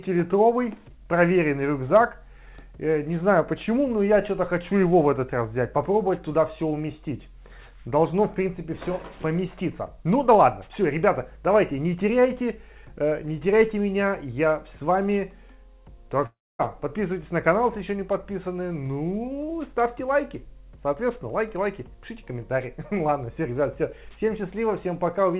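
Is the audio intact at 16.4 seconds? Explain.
No. From 16.26 to 16.61 s the audio breaks off in what is likely a long network dropout, and about 340 ms of the original sound is never heard. The receiver carries the last sound forward as a buzz or hiss that fades out over roughly 330 ms. About 250 ms of that stretch is silence or low steady noise. The sound then resumes further on, skipping the lost part. Throughout, the call codec limits the audio to nothing above 4 kHz.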